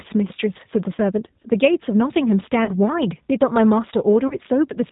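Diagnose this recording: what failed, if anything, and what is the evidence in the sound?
The speech has passed through a G.729 codec, the codec stage of a VoIP path. The damage is plainly audible: the speech sounds rough and slightly synthetic, as if rebuilt from a filter and a few pulses rather than carried as a waveform, which fits the 8 kbit/s G.729A variant. On a spectrogram, the energy stops sharply at 4 kHz throughout, and the harmonics look grainy and less continuous than in clean speech.

VoIP packet loss concealed by the speech codec shows at the network stage at 0.95–1.00 s, 2.65–2.71 s and 4.28–4.35 s. Each gap covers about 30 ms of missing audio, consistent with one lost packet. The decoder fills each gap by repeating its last pitch and filter at falling gain, so the speech is stretched into a brief buzzy tone or coloured noise that fades, and stays weak for a moment after the gap. 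On the waveform, the envelope decays smoothly with no hard dropout.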